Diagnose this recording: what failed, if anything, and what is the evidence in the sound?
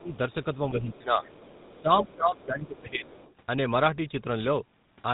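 Codec stage: GSM full-rate coding leaves a buzzy, gravelly roughness throughout and nothing above 3.8 kHz. The buzz, not just the missing treble, sets it apart from simple band-limiting, and fits 13 kbit/s GSM.

Call processing: speech suppressed in double talk from 0.0 to 0.19 s, the level dipping by about 20 dB. This was likely the echo canceller ducking the talker while both sides spoke.

Call processing: the other side's voice leaking through as a faint second voice, about 35 dB down from 0.05 to 0.33 s and about 25 dB down from 0.94 to 3.33 s. This is likely residual loudspeaker echo the canceller left behind, not a line fault.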